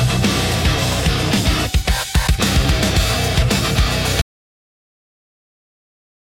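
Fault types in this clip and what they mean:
Audio dropout to silence: at 4.22 s the sound stops abruptly mid-flow and stays silent to the end, with no room tone, likely from the input being lost while recording continued; unlike a fade or noise gate, nothing tapers.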